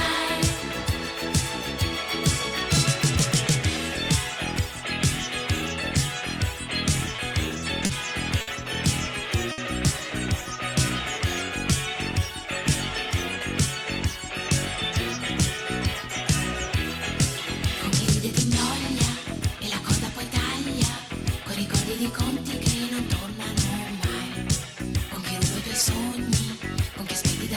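From 7.05 to 8.49 s the audio stutters. These are repeated stalls, where the jitter buffer ran dry five times and held the last sound for 140 ms in total, the longest hold 60 ms. Nothing is lost, but the audio drags unevenly.

At 9.52 s a single short stall from a late packet holds one sound for 60 ms, then resumes where it left off. It is one isolated hold rather than a cluster, and the delay rises by 60 ms.

Between 11.94 and 12.47 s a jitter buffer slow-down repeats pitch periods to add 51 ms, so the audio runs at 92% speed, drawn out but at the same pitch and without gaps.

A jitter buffer speed-up trims short pieces to cut delay. From 14.75 to 16.70 s it runs at 103%, dropping about 50 ms. From 19.16 to 19.58 s it runs at 109%, dropping about 40 ms, which is noticeably rushed. The pitch is unchanged in both.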